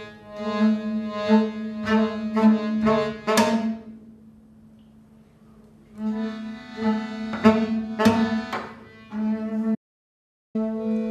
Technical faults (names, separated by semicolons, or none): audio dropout to silence